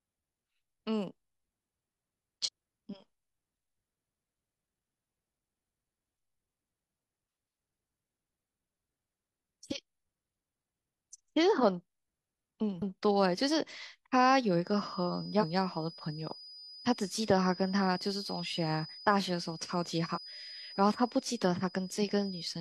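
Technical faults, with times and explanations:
2.42–2.49 s, 12.77–12.82 s, 15.38–15.44 s and 20.11–20.18 s, damaged data in a compressed stream: each is brief, lasting about 50 to 70 ms. Corrupted bytes make the decoder misread those frames and lose sync, so it outputs garbage until it locks onto the next frame header.
14.58 s to the end, feedback whistle: a thin, steady tone at 5 kHz sits well below the speech, roughly 20 dB down, and swells and fades slowly in level. The likely cause is a loudspeaker-to-microphone loop held just short of runaway, sustaining one frequency.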